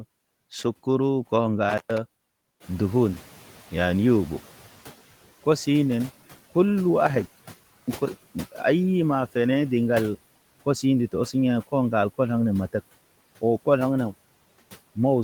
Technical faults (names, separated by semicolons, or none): intermittent contact; noise suppressor catching up